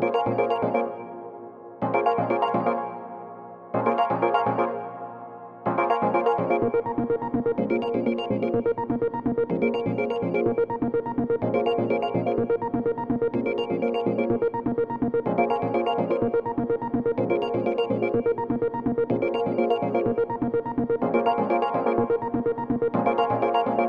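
No technical faults can be heard in this audio.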